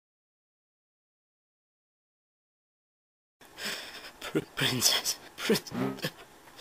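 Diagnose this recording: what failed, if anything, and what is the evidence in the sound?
The failure is chunks out of order, a buffer-stage fault in the driver or audio buffer. At 3.70–3.74 s and again at 4.40–4.44 s, a 20 ms block of audio plays one block late, swapped with the one after it. Nothing is missing, but each swap leaves three hard joins, heard as a brief jumbled stutter. On a waveform, the joins show as step discontinuities 20 ms apart. On a spectrogram, they show as thin vertical broadband lines.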